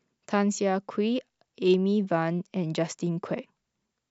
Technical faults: none

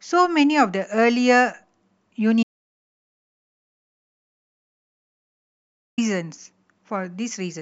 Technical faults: audio dropout to silence

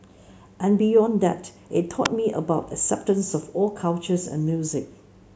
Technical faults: electrical switching spike

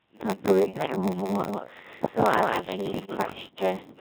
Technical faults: Codec 2 vocoder; block size mismatch (padded); bit errors on digital voice radio

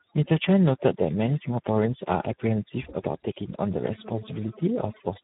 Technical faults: overdone noise removal; Speex codec

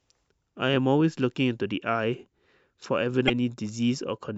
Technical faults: damaged data in a compressed stream

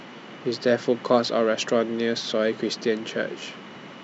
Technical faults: none

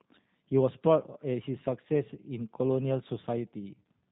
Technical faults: G.729 codec

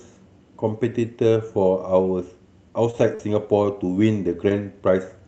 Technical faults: scattered short gaps

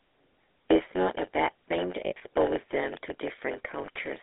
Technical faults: block size mismatch (padded); GSM full-rate codec; lost GSM frames

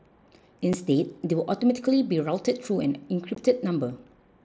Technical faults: unconcealed Bluetooth headset packet loss

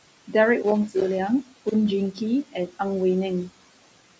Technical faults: noise suppressor artifacts; loose connector crackle; speech cut by the noise suppressor

